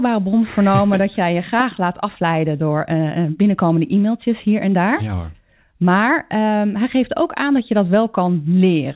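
No technical faults can be heard anywhere in this recording.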